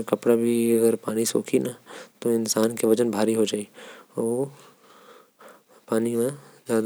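No audible faults in this speech.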